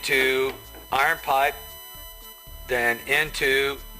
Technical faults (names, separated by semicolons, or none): USB whine